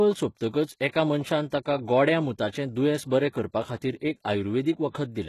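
From start to finish the top end sounds synthetic: the s sounds come out gritty and a bit lispy, and nothing reaches past 12.3 kHz. That's likely HE-AAC compression, rebuilding treble from copied lower bands at what sounds like roughly 16 kbps.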